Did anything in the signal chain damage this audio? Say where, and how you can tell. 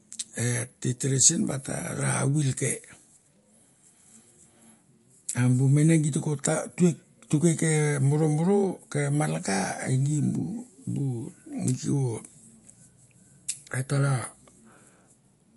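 Yes. MP3 compression throughout, at the codec stage: swirly, watery speech and nothing above 11.3 kHz, likely from an encoder starved of bits, fitting roughly 49 kbps.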